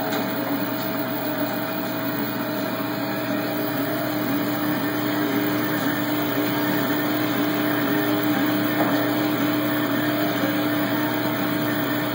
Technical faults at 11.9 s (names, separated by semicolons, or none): none